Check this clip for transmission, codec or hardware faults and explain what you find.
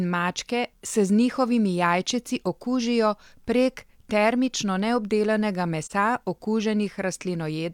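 One codec fault is audible. AAC frame loss with muting, 5.83 to 5.92 s: the decoder zeroed the missing spectrum, and overlapping windows fade the speech into a brief 43 ms dip, which fits a single lost frame.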